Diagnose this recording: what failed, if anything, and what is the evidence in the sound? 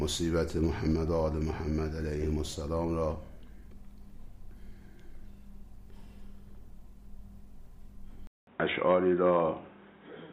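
The input was likely switched to a poorer device at the driver level, at 8.27 s. After a 200 ms silence, everything above 3.8 kHz is gone, the sound turns dull and boxy, the level shifts by about 5 dB, and a new noise floor roughly 35 dB down persists to the end.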